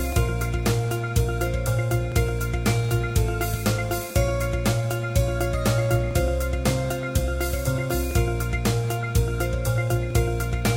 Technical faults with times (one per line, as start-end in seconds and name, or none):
0.12-10.11 periodic USB or driver dropouts